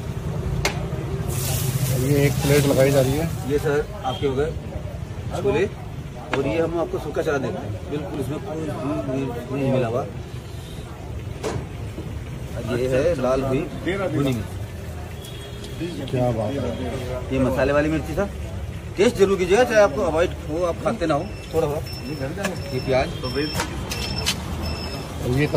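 You'll hear small clicks or tiny skips at 8.14, 10.12, 12.11 and 16.1 s, which is an overlap between stream segments. The spacing matches 2-second segments whose time stamps overlap, so the player trims a sliver of real audio at each boundary and the waveform jumps.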